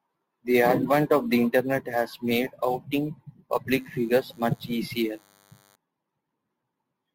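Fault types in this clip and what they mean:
DECT cordless phone buzz: A thin, steady buzz with a 100 Hz fundamental and a bright stack of harmonics sits under the speech from 3.76 to 5.76 s, quiet at about 35 dB below the speech. It comes from a nearby DECT handset or base transmitting a brief radio burst every 10 ms. The audio circuitry demodulates that pulse train, so the burst rate becomes a 100 Hz buzz.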